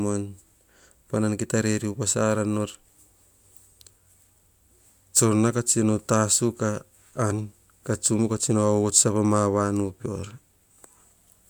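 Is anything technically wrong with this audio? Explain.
No, nothing technically wrong.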